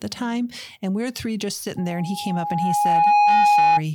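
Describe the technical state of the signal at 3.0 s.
At 3.0 s the speech is covered by loudspeaker feedback squeal, running from 1.76 s, just after "we we're three just", to 3.82 s. A microphone is re-amplifying its own loudspeaker, so an 829 Hz tone swells over about a second and a half to roughly 10 dB above the speech. Unlike a steady interfering tone, it grows by itself.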